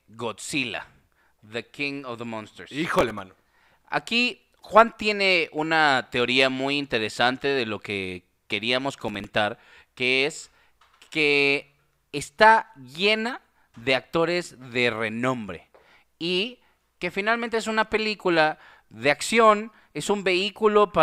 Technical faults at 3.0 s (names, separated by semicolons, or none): processor overload crackle